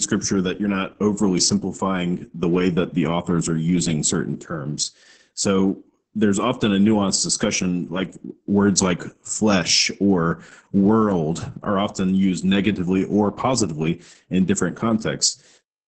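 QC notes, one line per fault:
throughout, Opus voice compression: heavy damage, speech sounds muffled, hoarse and slightly robotic, nothing above 8.8 kHz, which fits SILK wideband coding coarsely at roughly 10 kbps.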